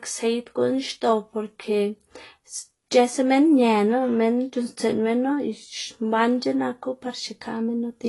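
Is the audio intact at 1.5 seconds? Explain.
No. At 1.5 seconds, as throughout the clip, there is plainly audible damage, likely from AAC compression at a rate that fits about 32 kbps: nothing above 11.5 kHz, and the speech sounds dull with a warbling, fizzy smear on sibilants, which a simple low-pass filter would not cause.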